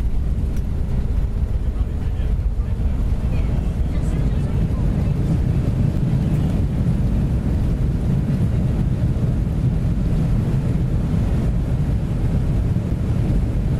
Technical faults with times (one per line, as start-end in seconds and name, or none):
5.97 block of digital silence